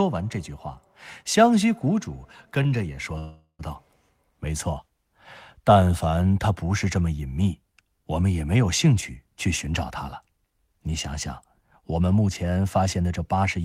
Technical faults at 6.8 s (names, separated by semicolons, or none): none